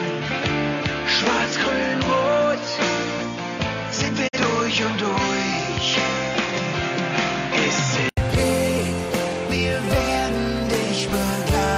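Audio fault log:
0.00–8.17 s, input switched to a poorer device: dull, band-limited sound with nothing above 7 kHz and added background noise about 30 dB below the signal, at an unchanged level. It clears up after an 80 ms silence at 8.17 s, likely because recording started on a narrower microphone or headset.
4.27–4.38 s, digital broadcast dropout: the sound fades out over about 20 ms, leaving a 43 ms hole. The receiver muted during corrupted data, which fits a single lost frame.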